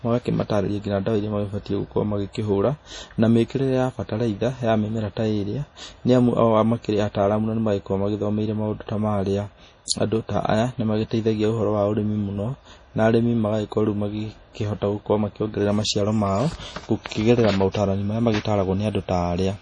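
MP3 compression, throughout: nothing reaches above 10.5 kHz, and the speech sounds watery and swirly with smeared onsets. The likely cause is heavy MP3 encoding, fitting a bitrate near 32 kbps, where the starved encoder drops treble and weak frequency lines flicker between frames.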